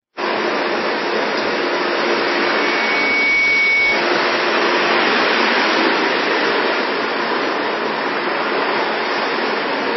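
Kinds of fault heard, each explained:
Low-bitrate audio saved at a high bitrate: Nothing is heard above 5.8 kHz across the whole clip, with a smeared, grainy texture throughout. This likely comes from a very low-bitrate MP3 re-encoded at a high bitrate. The larger second encoding cannot restore what the first removed.
Loudspeaker feedback squeal: From 2.02 to 4.15 s a single 2.2 kHz tone swells over about one and a half seconds into a squeal. It ends up roughly 5 dB above the sound. The microphone is picking up its own loudspeaker, and the loop gain exceeds one at that frequency.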